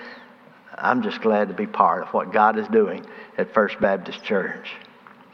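Lost LE Audio frames at 3.83 s: a brief gap, which fits a single dropped 7.5 ms frame, where the LC3 decoder filled in by repeating the previous spectrum with randomised signs, producing a tiny noisy smear rather than a click, beneath the light, barely audible lossy compression.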